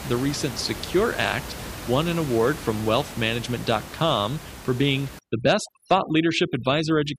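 From 5.19 s, after "for being", overdone noise removal cuts noise-level bands, leaving a blank spectrogram background flecked with specks.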